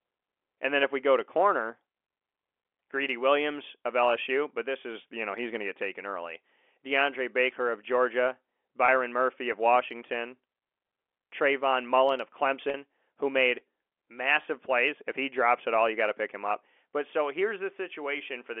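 Around 8.86 to 8.88 s, 12.70 to 12.74 s and 14.42 to 14.44 s there's packet loss with pitch repetition: the receiver fills each gap by repeating the last pitch cycle, so you hear brief buzzy, held moments. The 40 ms one sounds like two lost 20 ms packets, all over the narrow telephone band of the G.711 line.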